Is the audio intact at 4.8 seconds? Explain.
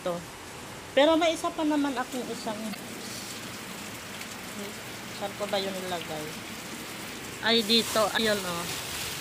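Yes, the audio at 4.8 seconds is intact, with no dropout, click, distortion or other technical fault at that moment.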